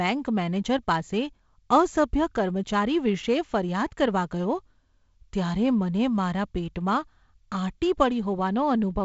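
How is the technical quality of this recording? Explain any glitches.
No glitches are audible here.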